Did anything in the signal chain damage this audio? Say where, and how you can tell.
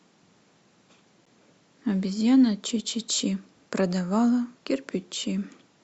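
Yes, at the playback stage. At 1.25 s the speech drops into a hole of about 11 ms with hard edges on both sides. This is a gap between stream segments, which fits 4-second segments. Timestamps left a small gap, and the player filled it with silence.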